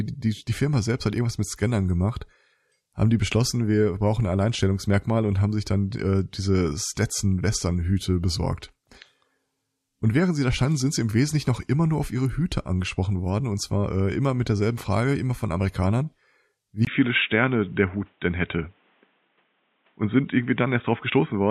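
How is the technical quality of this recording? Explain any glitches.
The recording has one clear fault near the end. At 16.85 s, after a gap of about 20 ms, the speech abruptly loses everything above 3.8 kHz and stays band-limited to the end of the clip. This is likely an input switched to a poorer device, such as a second microphone or a headset call profile. The level stays about the same, but the sound turns dull and boxy, with a new, faint background noise roughly 40 dB below the speech.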